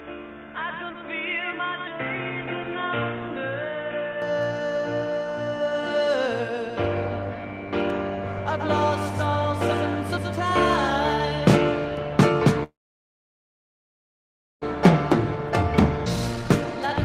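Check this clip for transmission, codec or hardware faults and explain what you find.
Yep, there are four faults in this one.

From the start to 4.22 s, the audio is dull and boxy, with nothing above 3.8 kHz, a level about 5 dB lower, and extra background noise roughly 30 dB down. That points to a likely input switched to a poorer device. There's no gap when it clears up at 4.22 s.

From 12.63 to 14.76 s there's a call audio freeze. The packets stalled and the jitter buffer ran dry, so the receiver stretched the last sound briefly before fading to about 1.9 s of silence. It's likely that's what happened, and the audio resumes where it left off with nothing lost.

From 15.98 s to the end, a jitter buffer speed-up kicks in. The receiver trims short pitch-period chunks over and over to cut the backed-up delay, so the audio runs at about 148% speed while keeping its pitch. In total it drops roughly half a second.

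At 16.05 to 16.08 s there's a skip ahead. Roughly half a second of audio was dropped, probably an overflowing buffer discarding queued packets, and playback jumps forward with the two sides stitched together almost directly.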